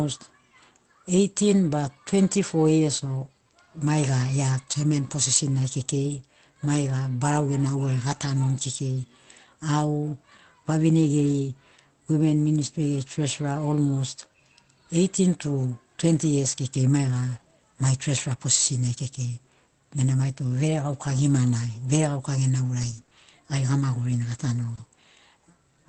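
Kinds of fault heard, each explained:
Lost packet rebuilt from error correction: at 4.87 to 4.93 s, 6.09 to 6.19 s and 8.11 s, packets went missing, but each following packet carried a low-bitrate spare copy that the Opus decoder played instead, so there's no hole. The patched stretches of about 40, 60 and 20 ms, which fit two, three and one lost 20 ms packets, sound briefly grainier and noisier than the speech around them.
Scattered short gaps: between 22.81 and 24.79 s, roughly four separate packets were lost or arrived too late, each hole about 20 ms at most. With no spare copy available, the receiver filled each by stretching the preceding sound forward. The speech stays clear, with small ticks and smeared hiccups across only a small share of that span.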